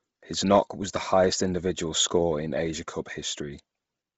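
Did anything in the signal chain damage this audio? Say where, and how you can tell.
Yes, at the codec stage, across the whole clip. The speech has a breathy, grainy edge, and nothing is present above 7.8 kHz. This heavy damage is likely Bluetooth LC3 compression. At a low rate, which fits about 24 kbps with 7.5 ms frames, the transform codec discards most upper-band detail and fills it with shaped noise. A plain low-pass filter or band limit would sound dull but clean. Here the noise filling adds the grit that tells them apart.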